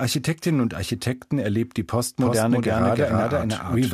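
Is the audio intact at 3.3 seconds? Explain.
No. At 3.3 seconds the speech is inside a doubled audio track that begins at about 2.19 s, just after "erlebt die", and runs to the end of the clip. A second full-band copy of the speech sits roughly 300 ms behind the original at about the same level. Each syllable is therefore heard twice, and the copy sounds clean and dry, with no decay or room colour. This likely comes from a slower capture path or an edit that left two copies out of step.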